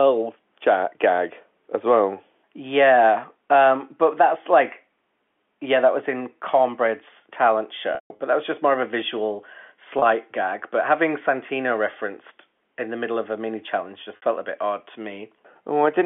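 At 7.95 to 8.19 s, before "but that was just", there is packet loss with pitch repetition. The last pitch period is looped to fill the gaps. The longest gap, 150 ms, fades to silence. Brief buzzy holds follow at 9.99 s and 14.16 s.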